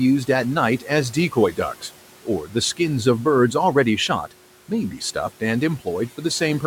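The noise suppressor mistook part of the speech for noise at 2.45 to 2.55 s, cutting this short speech clip by up to about 9 dB, so roughly a tenth of a second sounds swallowed and faint. The background room noise sits about 20 dB below the speech.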